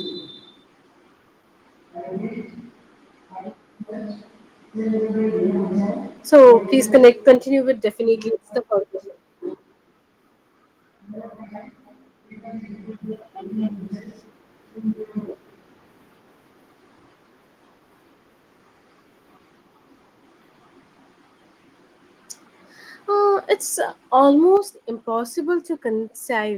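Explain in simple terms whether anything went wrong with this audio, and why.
Microphone overload, from 6.94 to 7.32 s: the speech peaks get a harsh, crackly edge, likely because the microphone was set too loud and its loudest moments were chopped off.

Microphone volume stepped down, at 6.36, 7.35, 23.55 and 24.57 s: the speech and background suddenly drop in loudness, likely because the call software turned the microphone down. The biggest drop, at 7.35 s, follows right after the crackly stretch.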